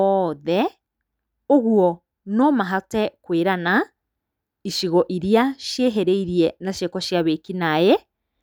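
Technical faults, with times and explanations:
Nothing technical stands out in this speech recording; there's no fault to point to here.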